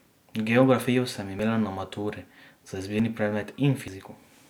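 The clip is speech with three abrupt skips. At 1.39 s and 3.00 s the sound jumps forward, losing roughly 20 ms each time. At 3.88 s a longer piece disappears, around 70 ms, and the jump is larger. There is no silence at any of these points. The audio on either side is simply joined. The likely cause is a dropped buffer (overrun): the hardware overwrote incoming samples before the program collected them.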